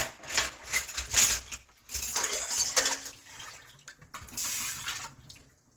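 From start to finish the sound is coarse and grainy, with tonal parts smeared into a rough, hissy texture and a muffled, hoarse quality, even though content reaches up to about 20.2 kHz. This is likely Opus compression at a low rate. The hoarse, dulled character points to the encoder's hybrid mode at roughly 16 kbps, where bands starved of bits are filled with noise or folded copies of lower bands.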